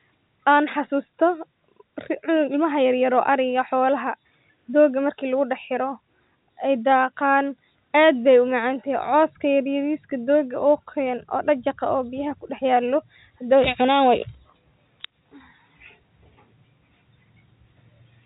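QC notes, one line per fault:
Nothing stood out on listening to this speech, which carries the narrow band of G.711 telephone coding with nothing above about 3.8 kHz.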